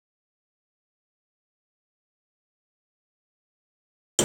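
No technical faults can be heard anywhere in the speech recording.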